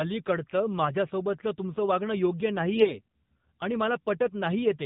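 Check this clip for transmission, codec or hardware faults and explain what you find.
Two faults are present: narrowband mobile coding across the whole speech clip, and a brief burst of corrupted frames near its three-second mark.

AMR narrowband mobile codec, throughout: The speech passes through a vocal-tract model with 8 kHz sampling, so nothing above 4 kHz survives and the voice sounds boxed-in and telephone-like. The model is fed by only a few excitation pulses per subframe at a low bit budget, which fits a 7.4 kbps mode. That sparse excitation gives the voice a plainly audible buzzy, synthetic edge.

AMR bit errors, 2.76 to 3.01 s: For about a quarter of a second, the voice turns hoarse, scratchy and gargly while roughly holding its pitch and loudness. Six frames within that span are hit. Each frame's core bits still passed their checksum, so the decoder accepted it. The weaker, unprotected bits arrived flipped, at a rate of around a few percent. 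Misplaced excitation pulses and slightly wrong gain and spectral values produce the rough, broken texture.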